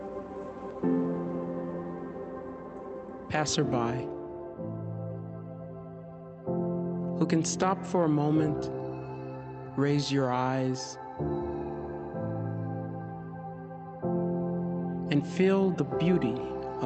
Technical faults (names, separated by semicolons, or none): none